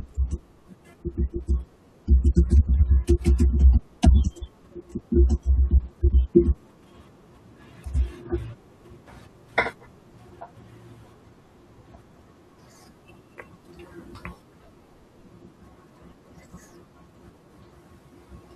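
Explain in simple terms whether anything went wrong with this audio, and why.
Listening to the recording, nothing in the speech stood out as having gone wrong at any point.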